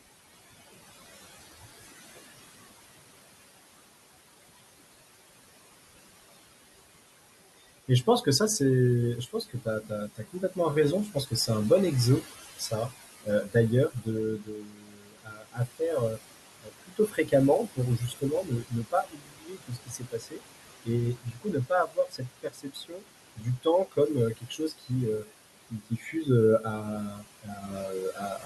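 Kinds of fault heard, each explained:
Noise suppressor artifacts: The suppressor lowers each band it judges to be steady noise, frame by frame. Here the room noise, about 13 dB below the speech, is pushed down by about 19 dB. It sinks between phrases and rises again under the speech.
Speech cut by the noise suppressor: The suppressor mistakes parts of the speech for noise and turns them down. Brief, shallow dips come near 7.9 s. Deeper ones follow from 9.26 to 11.49 s. From 12.22 s to the end, losses recur, reaching about 22 dB.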